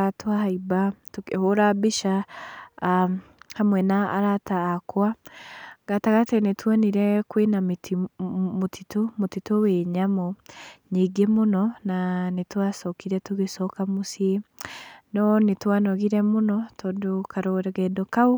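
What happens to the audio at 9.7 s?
Nothing goes wrong at 9.7 s; the speech carries straight through that point without any dropout, click or distortion.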